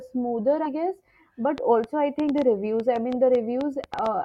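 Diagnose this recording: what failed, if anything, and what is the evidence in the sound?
At 0.65 to 0.68 s, compressed frames are skipped at the codec or storage stage. The speech jumps ahead by roughly a tenth of a second, a whole-frame jump that fits 20 ms frames. The join leaves no gap, unlike a dropout's silence.

From 1.58 to 4.07 s there is a train of clicks: about fifteen similar pops, irregularly spaced at about 5.5 per second and peaking about 10 dB above the signal. They sit over pauses too and nothing is missing, which separates them from frame loss. The likely cause is interference in the analogue wiring or a faulty connection or power supply.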